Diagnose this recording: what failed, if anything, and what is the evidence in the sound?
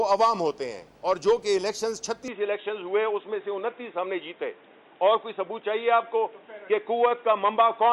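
At 2.28 s the sound turns dull and boxy and stays that way to the end. Nothing is left above 3.8 kHz. There is no gap at the change and the level holds steady. A new background noise appears, roughly 35 dB below the signal. The stage is the capture device itself. The likely cause is an input switched to a poorer device, such as a headset's call profile. Its narrower band and its own noise replace the original microphone.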